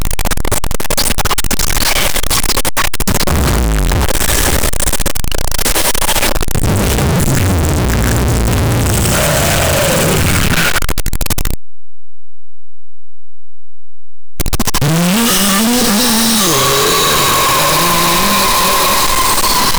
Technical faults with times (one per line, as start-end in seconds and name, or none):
0.00-19.79 signed and unsigned mixed up